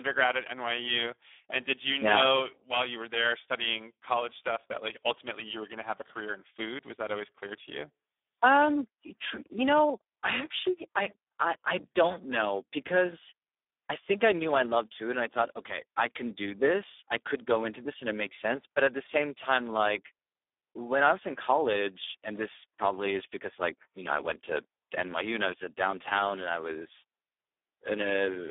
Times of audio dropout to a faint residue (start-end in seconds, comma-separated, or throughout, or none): none